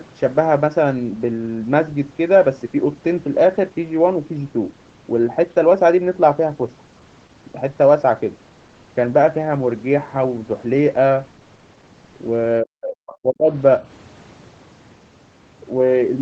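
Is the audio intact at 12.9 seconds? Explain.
No. From 12.62 to 13.5 s the speech sinks sharply, at its deepest by roughly 40 dB, and is pulled down for about a second overall, so at 12.9 s it is not intact. This is speech suppressed in double talk. The likely cause is that both ends were talking at once and the echo canceller could not tell this talker from the returning loudspeaker echo, so it attenuated everything together.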